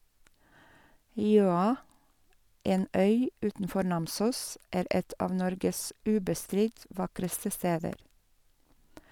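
A speech recording with nothing technically wrong with it.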